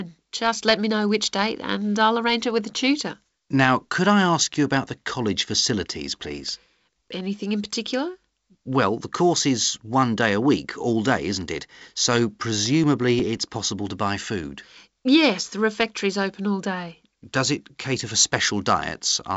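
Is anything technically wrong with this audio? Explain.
Yes, there are CD scratch ticks in two bursts. The first runs 6.31 to 7.20 s, between "about the college facilities" and "in particular", and the second runs 12.66 to 14.09 s. Each turn of the disc, a blemish wipes out more data than error correction can rebuild, so the player patches the gap. You hear tiny clicks of a few milliseconds, about six or seven a second.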